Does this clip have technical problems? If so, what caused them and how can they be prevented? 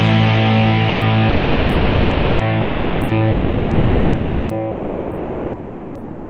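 Yes. Sound is dropped by the voice detector at 0.89–1.01, 1.29–2.39, 2.61–3.09, 3.31–4.49 and 4.71 s to the end. Each time, comfort noise replaces it. Opus DTX likely mistook real sound for background. Disabling DTX would prevent this.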